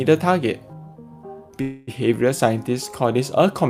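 At 1.61 s the audio stops moving forward and the last sound is drawn out into a buzzy, fading tail. This lasts until 1.90 s, filling about 261 ms. It never drops to silence. Then the audio picks up exactly where it stopped. Nothing is lost, but everything after runs about 261 ms later. This is a call audio freeze. The likely cause is packets held up in transit, letting the jitter buffer run dry.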